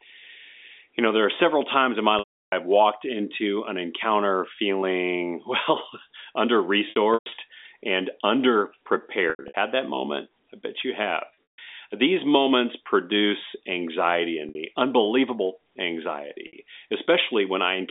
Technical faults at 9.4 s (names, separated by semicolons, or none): packet loss with pitch repetition